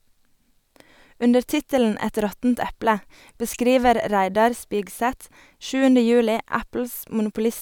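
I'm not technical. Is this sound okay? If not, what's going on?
Yes, nothing stood out as a problem when listening to this recording.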